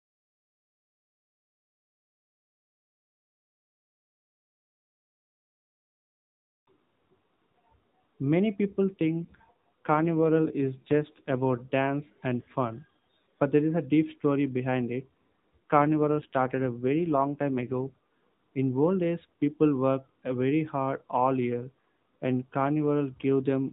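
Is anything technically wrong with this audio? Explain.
Yes. An AMR rate drop occurs from 8.88 to 11.56 s, ending just before "dance and fun but," and again from 15.57 to 17.98 s, right after "deep story behind it." The network switched the mobile codec to fewer speech bits, likely to protect a weak radio link, which fits a fall from 12.2 to 5.9 kbps. The narrowband band stays capped at 4 kHz with no gap, but the speech turns rougher and buzzier until the rate recovers.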